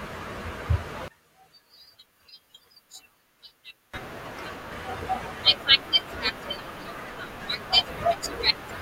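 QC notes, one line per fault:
1.08–3.94 s, one channel inverted: in the mono sum the speech drops by about 21 dB and turns faint, because one stereo channel likely has reversed polarity, so the centred voice, common to both sides, cancels and only the small left-right difference survives. On a waveform the envelope collapses to a narrow band for that span. On a spectrogram the low frequencies nearly vanish and the harmonics fade to faint traces until 3.94 s.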